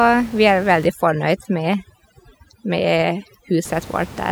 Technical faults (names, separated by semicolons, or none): overdone noise removal